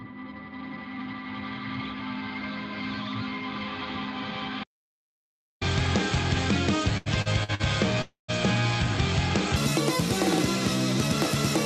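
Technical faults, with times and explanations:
4.64–5.61 s, audio dropout to silence: the sound stops abruptly and resumes just under a second later. The gap is silent with no room tone. This is likely a lost input, such as a disconnected device or a failed link, while recording continued and wrote silence. About 0.98 s of material is gone. On a waveform it shows as a flat line. On the spectrogram it is a fully blank vertical band with hard edges on both sides.
6.97–7.62 s, repeated stalls (stutter): the jitter buffer ran dry four times as packets arrived late. Each time, the receiver stretched the last sound to fill the wait, so the audio drags and hiccups without losing content. These fills total about 221 ms, roughly a third of this stretch, and the longest is 84 ms. On a spectrogram, short smeared or repeated slices interrupt the normal texture, with content below the 8 kHz ceiling of the call path.
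8.02–8.30 s, call audio freeze: the sound hangs for about 269 ms and then picks up where it left off, so nothing is missing and a gap has been inserted. The likely cause is packets held up in transit, which left the jitter buffer empty. The receiver first continued the last sound as a fading buzz or hiss, then fell silent for about 140 ms. The waveform shows a decaying tail followed by a flat stretch. The spectrogram shows a frozen, smeared slice that fades to blank.
9.56 s to the end, section at the wrong speed: the closing section plays 1.63 times too fast, which is likely a clock or sample-rate mismatch in editing or playback. Speed and pitch rise together by about ten semitones, so the sound turns high, thin and hurried. On a spectrogram, harmonics and formant bands jump upward and events become compressed in time. On the waveform, cycles visibly shorten from that point.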